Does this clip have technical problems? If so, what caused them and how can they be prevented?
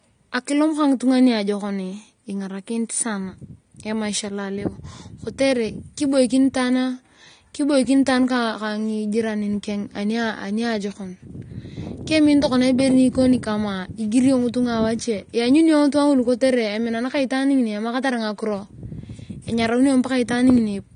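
Yes. Throughout, the speech sounds dull and smeared, with a fizzy, warbling edge on sibilants and nothing above 9.7 kHz. That points to likely AAC compression at a low bitrate, which fits roughly 32 kbps AAC-LC starving the upper spectrum. Export at a higher bitrate, or keep a lossless master.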